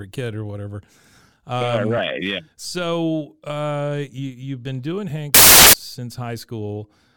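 From 5.34 to 5.73 s the speech gives way to loud, harsh broadband noise: samples built from the wrong bytes, the bytes of each sample put together wrongly so fast-changing low bits dominate each value.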